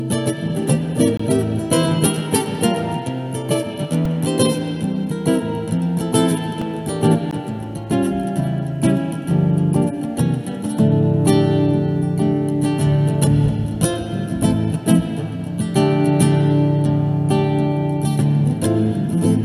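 At 1.17 to 1.20 s there's a block of digital silence about 21 ms long, which fits a 1024-sample block that was never filled in time. The audio drops straight to silence and comes straight back with no fade, leaving a tiny hole. At 7.31 s there's a second, shorter gap of about 15 ms. It cuts in and out just as hard.

Between those, at 4.05 s and again at 6.62 s, there's a repeated buffer. Fresh audio didn't turn up in time, so the output played the last chunk again, and a chunk that short, about 1.45 ms, points to a 64-sample buffer. Because the chunk is so small, it doesn't come across as a stutter. It's more of a quick click or brief buzz, a bit longer at 4.05 s, where the chunk loops more times than at 6.62 s.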